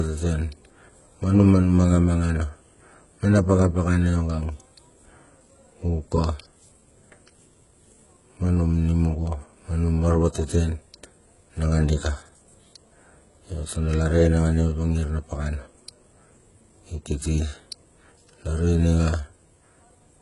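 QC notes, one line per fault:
Throughout, HE-AAC compression: the speech's s sounds are gritty and lispy and its treble sounds metallic, likely from upper bands rebuilt from copied lower ones, which fits about 12 kbps. A spectrogram shows smeared, repeated upper-band texture and a hard ceiling at 11.1 kHz.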